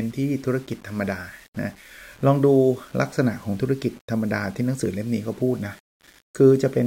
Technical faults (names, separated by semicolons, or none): none